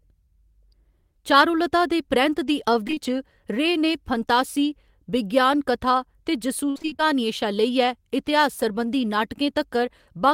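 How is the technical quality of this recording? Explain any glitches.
The recording has two packet-loss problems in the speech.

At 2.87, 2.91 and 2.95 s, short concealed packet loss: three 20 ms holes were patched by extending the preceding sound, giving brief smears. These are fleeting, not continuous choppiness.

From 6.7 to 7.08 s, just after "फंतासी विज्ञान कथा ते", repeated packet loss (robotic sound): seven gaps, the longest 55 ms, leave about half the span concealed. The sound turns choppy with pieces missing rather than briefly smeared.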